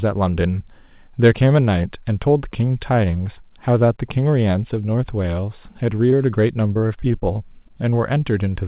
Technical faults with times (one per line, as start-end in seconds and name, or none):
6.10-6.14 short concealed packet loss
6.68-7.24 repeated packet loss (robotic sound)
7.68-7.94 short concealed packet loss